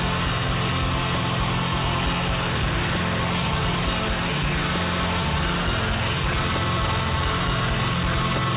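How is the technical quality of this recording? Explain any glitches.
The technical quality holds up, with no glitches to explain in this music, which comes through a telephone-grade call path with nothing above 4 kHz.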